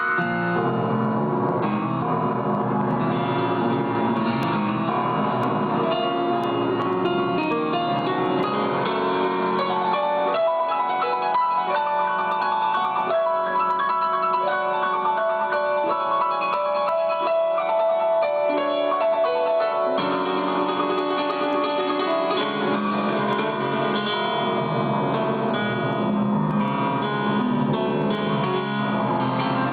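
Gain pumping runs through the whole recording, with the level swinging by about 10 dB. That swing, rather than a steady compressed level, points to input gain set far too high, with a fast limiter likely clamping every peak. From 4.43 s to 8.43 s, periodic USB or driver dropouts produce a tick once per second, about five in all. Each one is roughly a millisecond of silence. Their exact one-second spacing, and the fact that they occur only where there is signal, separate them from random clicks or crackle.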